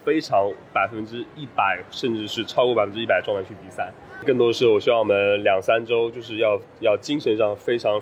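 No technical faults are audible.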